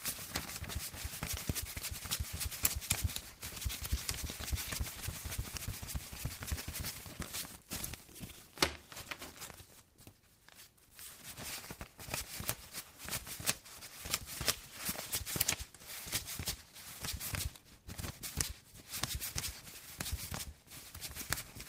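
Everyday sounds, with no technical faults to be heard.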